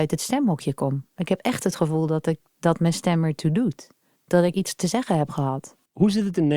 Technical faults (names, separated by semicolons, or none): none